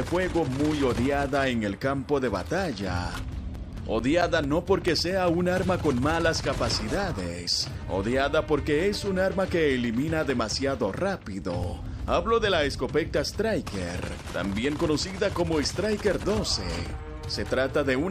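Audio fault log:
3.10–4.88 s: CD scratch ticks. Nine regular ticks, about five per second, the longest near 10 ms. A scratch spoils data on each disc turn, and the player patches it.
10.30–12.30 s: CD scratch ticks. Ten briefer ticks, the longest near 5 ms, at the same steady rate.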